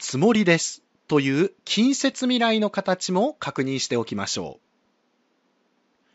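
No technical faults are audible in this speech.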